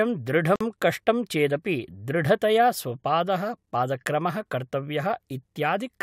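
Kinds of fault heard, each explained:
Gap at a join of encoded pieces: At 0.56 s the speech drops out for about 49 ms and then resumes just before "कष्टं चेदपि दृढतया", carrying on from where it stopped, with the edges of the gap smeared by the codec. The speech was encoded in separate pieces, roughly 6 s long, which were joined without trimming. The encoder's leading delay and the padding on the last frame stayed in, so a short stretch of silence sits inside continuous speech.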